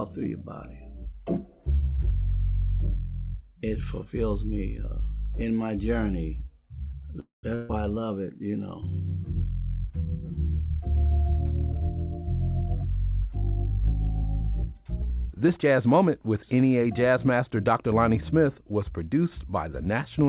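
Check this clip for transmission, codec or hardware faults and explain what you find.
Three transmission faults are audible, all of them from the call's network path rather than the codec or hardware. The band ends at 4 kHz, which fits the G.711 mu-law call codec.

From 7.2 to 7.45 s there is a call audio freeze. The last sound hangs on as a fading buzz or hiss, then drops to about 150 ms of silence before picking up exactly where it stopped, with nothing lost. The likely cause is delayed packets draining the jitter buffer, which pushes everything after it about 230 ms later.

A burst of packet loss follows from 7.55 to 7.71 s. The sound again stretches into a held, dimming buzz or hiss for about 140 ms, but this time it resumes further on, with that stretch gone. Consecutive packets arrived too late or not at all, so the receiver concealed the gap and skipped ahead.

Between 13.70 and 16.09 s a jitter buffer speed-up makes the audio run about 4% fast at unchanged pitch. 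With more audio in the buffer than it aims for, the receiver cut many tiny pitch-period slices, roughly a tenth of a second in total.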